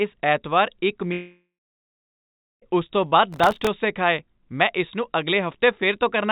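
From 1.12 to 2.64 s the speech cuts out. The last sound is stretched into a fading buzz, then about 1.1 s of near-silence follows, and the speech resumes at "ਉਸ ਤੋਂ" with roughly 1.5 s of it simply gone. This is likely a long network dropout.

Between 3.33 and 3.67 s a gritty processor overload crackle rides on the speech, ending before "ਖਾਏ ਮੈਂ ਇਸ ਨੂੰ". Some forty consecutive tiny buffers, each well under a millisecond, miss their deadline. Each miss replays stale audio with hard edges. The whole band, like the rest of the call audio, stops at 4 kHz.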